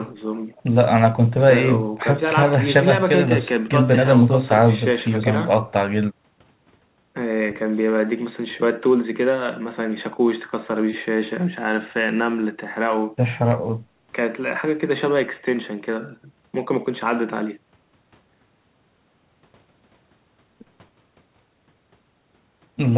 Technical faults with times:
none

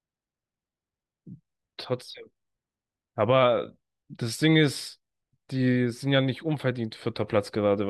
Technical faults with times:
none

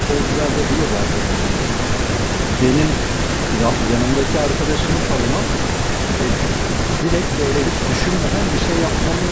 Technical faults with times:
0.00-7.14 echo leak
7.36-7.42 speech suppressed in double talk
7.53-9.19 echo leak

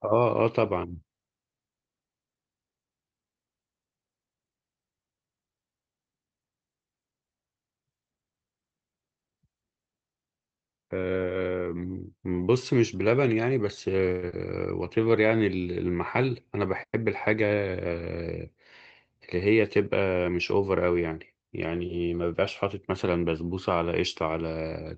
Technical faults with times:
14.11-14.32 long network dropout
15.00-15.37 jitter buffer slow-down
16.24-17.04 jitter buffer speed-up

